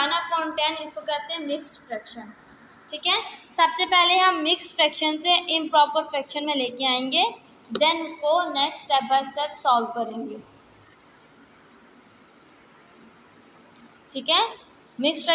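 No technical fault can be heard anywhere in this audio. Nothing in the sound points to a problem with how it was captured, processed or delivered.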